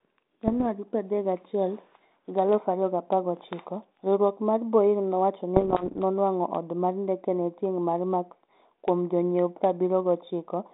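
Bit errors on an ADPCM link hit at 0.47 to 0.66 s and 5.56 to 5.98 s, just before "nonwang'o oda mar ndekege". Flipped bits knock the decoder's prediction off, leaving pops and rough, jumpy bursts.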